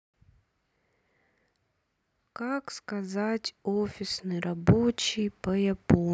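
Speech recording with automatic gain rising from 2.2 s to 6.1 s. The level control judged the input too quiet and lifted its gain slowly, by about 6 dB. Voice and background noise swell together across those four seconds.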